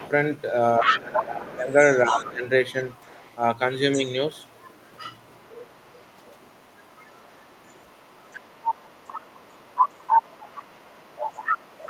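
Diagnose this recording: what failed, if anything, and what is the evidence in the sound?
Other side's voice leaking through, in call processing. A second voice sits under the talker from 0.0 to 1.21 s at roughly equal level, then about 15 dB down at 1.85–3.37 s, 3.94–4.54 s and from 5.21 s to the end. This is likely loudspeaker echo the canceller failed to remove.

Speech suppressed in double talk, also in call processing. While both sides overlap, the talker's level falls by up to about 15 dB across 0.8–2.46 s, about 5 dB briefly at 3.95–4.02 s, and about 20 dB from 11.05 s onward. The echo canceller likely turned down both voices together.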